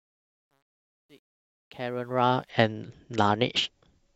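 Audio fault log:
0.00–2.50 s, truncation distortion on a fade: the speech fade-in's quiet start sounds gritty, worst until about 1.8 s. The gain stage kept too few bits without dither, which fits 11-bit resolution.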